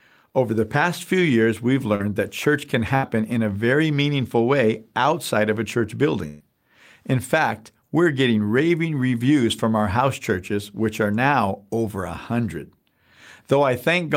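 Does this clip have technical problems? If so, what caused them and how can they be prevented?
Yes. This speech clip has two kinds of network fault, both from audio packets that arrived too late or not at all.

Short concealed packet loss happens at 1.95–2.01 s, between "past few years we've" and "that church can". About 40 ms of audio never reached the decoder, and the receiver filled the gap by continuing the preceding sound before blending back into the real signal. It is heard as a brief smear or wobble. Unlike the bursts below, it is too short for any fading to be heard. Adding forward error correction or a slightly deeper jitter buffer would let the receiver recover or wait for such a packet.

A burst of packet loss occurs twice. At 2.95–3.16 s, after "that church can" and before "in a very meaningful", about 80 ms is lost. At 6.28–6.42 s, just after "outside of a church", about 120 ms is lost. 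Each time, several consecutive packets failed, and the concealment stretched the last sound into a held buzz or hiss that dies away. The audio then jumps ahead with that stretch missing. The fading tail and the skipped material separate these from the short loss. Reducing network congestion, using a wired or more stable connection, and enabling redundancy in the codec would prevent these bursts.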